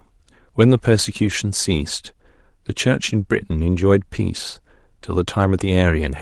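Speech, passed through an Opus call path with audio up to about 12 kHz, shows a lost packet rebuilt from error correction at 1.29 s, 2.93–2.95 s and 4.17–4.19 s. Each loss is a 20 ms frame rebuilt from the next packet's low-bitrate copy, heard as brief roughness and added noise rather than a silent gap or the smeared, buzzy extension of plain loss concealment.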